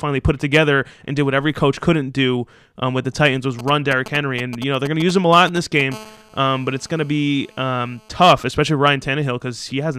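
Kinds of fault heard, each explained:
GSM signalling bursts: from 3.59 to 5.82 s, a galloping run of short 217 Hz buzzes sits under the speech at roughly 10 dB below it. A nearby 2G phone is sending brief radio bursts while it signals, and the audio circuit rectifies them into sound.
GSM phone buzz: from 5.92 to 8.35 s, a steady, raspy 217 Hz buzz rich in harmonics runs under the speech at about 26 dB below it. A nearby 2G phone in a call transmits continuously pulsed bursts, which the audio circuit demodulates into this tone.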